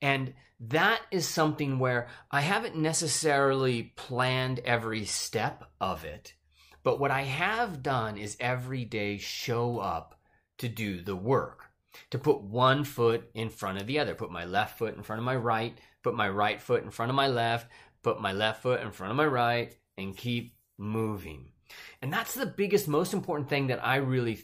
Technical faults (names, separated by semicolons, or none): bit error spike